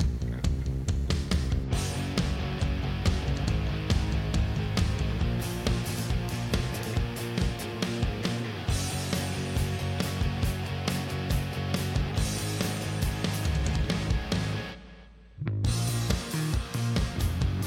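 At 12.89 s an overlap between stream segments removes a few milliseconds of audio: the waveform jumps abruptly, heard as a tiny skip, and shows as a thin vertical line on a spectrogram.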